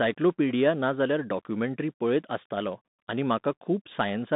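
Throughout the speech, the audio has passed through a Bluetooth CVSD headset codec, which encodes the signal as a single up-or-down bit per sample with an adapting step size, which fits a 64 kbit/s stream. The line band runs only from about 150 Hz to 3.7 kHz, so the voice sounds thin and boxed in. The damage is plainly audible: fast, loud high content outruns the step and distorts, s sounds turn scratchy, and a granular hiss sits beneath the speech.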